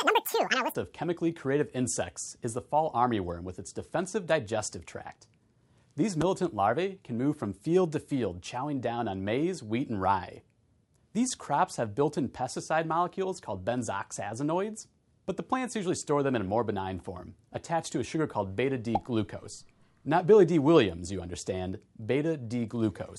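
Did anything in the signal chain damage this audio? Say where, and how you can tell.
Yes. From 0 to 0.75 s, playback runs double speed and an octave high: a wrong sample rate, which fits 24 kHz material clocked out at 48 kHz.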